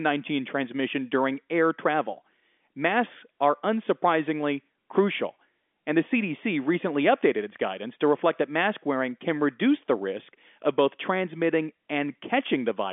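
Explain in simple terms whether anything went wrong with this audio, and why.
Nothing went wrong here.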